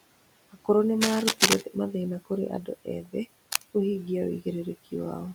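Speech, with noise suppressor artifacts throughout: the background is pulled down by about 18 dB between phrases and swells back under them, showing on a spectrogram as a noise floor that gates on and off. Cable scratch noise, most likely from a worn cable or connector being moved, appears from 1.01 to 1.61 s and from 3.47 to 3.63 s as dense, ragged broadband bursts roughly as loud as the speech, seen as spiky vertical smears across the spectrogram. From 3.03 to 3.15 s the suppressor mistakes part of the speech for noise and cuts it by up to about 15 dB, so roughly a tenth of a second sounds swallowed and shows as a sudden dip in the waveform envelope. Room noise sits about 20 dB below the speech as a faint steady floor.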